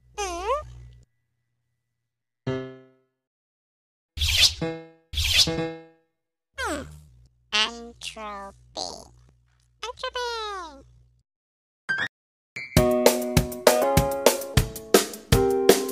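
The audio has two playback stalls, each followed by catch-up at higher speed. It goes silent mid-flow from 3.28 to 4.09 s (0.81 s) and from 12.07 to 12.56 s (0.49 s). The likely cause is the player's buffer running dry or its thread being blocked. After each gap the player works off the backlog by resampling at 1.25 times normal speed, raising pitch by about four semitones, from 4.09 to 7.09 s and from 12.56 to 14.54 s, before returning to normal rate.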